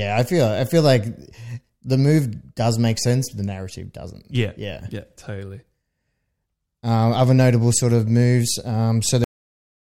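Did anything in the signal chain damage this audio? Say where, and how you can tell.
Yes, a cut-off end: the speech stops mid-sound at 9.24 s into flat digital silence with no decay, so the final buffers never got written to storage.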